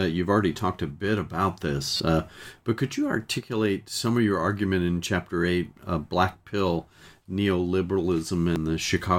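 A brief disturbance, heard as a chirp, click or short gap, interrupts the speech from 1.97 to 2.00 s and again at 8.56 s. This is damaged data in a compressed stream: corrupted bytes make the decoder misread those frames and lose sync until it finds the next frame header.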